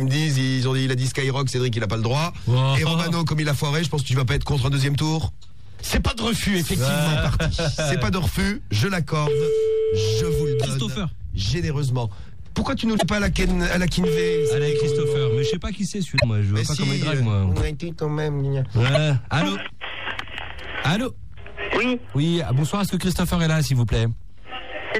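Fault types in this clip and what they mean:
Damaged data in a compressed stream: corrupted bytes make the decoder misread frames and lose sync, causing brief blips at 10.63, 12.95, 16.16 and 18.95 s.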